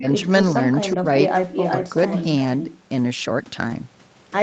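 From 0.0 to 0.28 s and again at 0.96 to 1.05 s, the speech dips by roughly 15 dB in short bites. This is likely speech suppressed in double talk, with the echo canceller ducking the talker while the far side speaks.

At 0.39 to 0.45 s, about 40 ms (fitting two 20 ms frames) is a lost packet rebuilt from error correction. There is no gap, but that stretch turns briefly grainy and noisier. This continuity is what sets it apart from concealment of a true loss.

From 0.8 to 0.94 s, a faint copy of the sound trails 375 ms behind, about 25 dB down. From 1.23 to 2.26 s it returns far stronger, only about 5 dB below the main sound. This is likely echo leak from a loudspeaker side. The fixed 375 ms delay distinguishes it from room reverberation.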